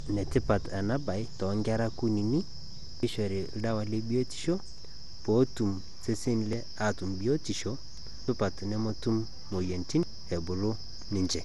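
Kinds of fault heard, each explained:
Generation loss: The speech sounds swirly, smeared and hollow, with blurred attacks and nothing above 11.8 kHz. The likely cause is repeated decoding and re-encoding, around ten passes, through MP2 at 96 kbit/s. Each pass requantises on a shifted frame grid, so noise accumulates.
Audio missing between chunks: Skips occur at 3.03, 4.78, 6.53, 8.28 and 10.03 s, each dropping roughly 300 ms with the two sides joined directly. This likely comes from a recorder or processor losing audio at each handover between chunks, which fits 2-second chunks.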